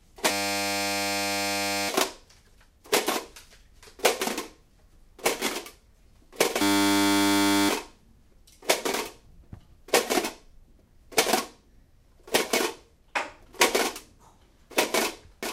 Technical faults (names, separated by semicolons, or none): system hang loop; doubled audio track